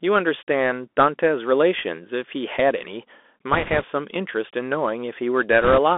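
Bluetooth CVSD headset codec, throughout: the whole clip has been through the narrowband headset path, with the band held to roughly 250 Hz to 3.5 kHz, so the speech sounds thin and boxed-in. The damage is plainly audible. A one-bit delta coder tracks the waveform up or down in adaptive steps, consistent with a 64 kbps CVSD stream. Where the signal rises faster than the step can follow it smears and distorts, sibilants turn scratchy, and a fine granular hiss sits under everything.

Bit errors on a Bluetooth voice link, from 3.53 to 3.85 s and again from 5.61 to 5.78 s: flipped bits in the CVSD stream push the reconstructed waveform briefly the wrong way. Because each bit carries only a small step and the error fades quickly, there are no sharp clicks. Instead a rushing, crackly noise rides over the speech. It is noticeably rougher in the second burst, where the error rate is around 5 percent compared with roughly 3 percent in the first.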